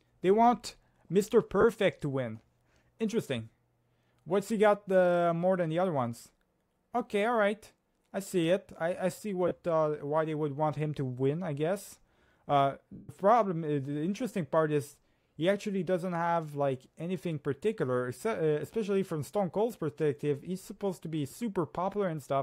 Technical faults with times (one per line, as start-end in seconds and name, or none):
1.61-1.64 lost LE Audio frames
9.48-9.51 lost LE Audio frames
12.93-13.10 lost LE Audio frames
21.31-21.33 lost LE Audio frames